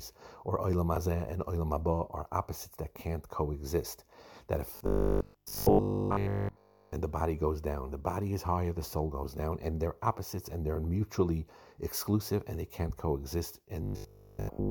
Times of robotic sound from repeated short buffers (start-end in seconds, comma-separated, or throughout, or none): 4.77-6.93, 13.83-14.70